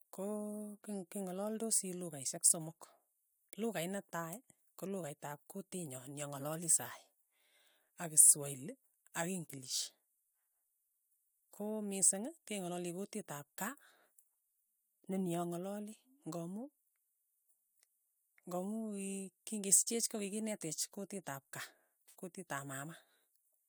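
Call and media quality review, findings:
Nothing in the speech stood out as a problem on listening.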